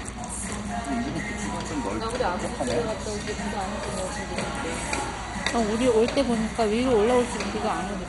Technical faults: MP2 compression

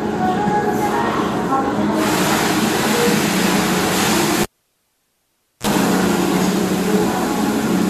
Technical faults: cable pulled and plugged in

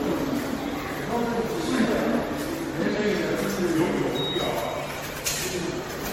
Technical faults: generation loss

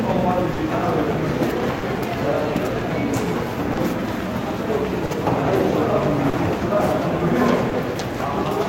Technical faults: clock drift between sender and receiver; short stall from a late packet

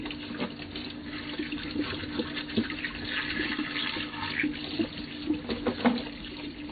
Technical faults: MP3 compression

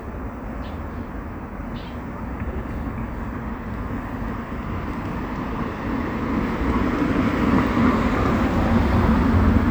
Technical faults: none

